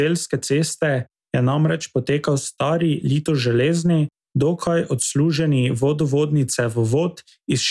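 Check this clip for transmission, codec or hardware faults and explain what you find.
Nothing stood out on listening to this speech recording.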